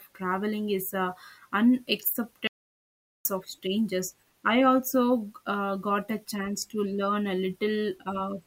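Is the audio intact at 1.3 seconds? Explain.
Yes, the speech at 1.3 seconds plays through intact, with no audible fault at that moment.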